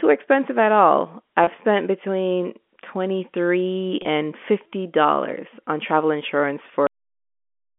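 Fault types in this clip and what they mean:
Packet loss with pitch repetition: Single 30 ms packets vanish at 1.44 s, between "expensive at all" and "spent between", and again at 4.02 s. The receiver fills each gap by repeating the last pitch period, heard as a brief, slightly held buzzy tone.
Cut-off end: The final buffers never reach the output, so the audio stops mid-sound at 6.87 s, right after "on travel insurance". It falls straight into digital silence with no natural decay, leaving the last 0.9 s empty.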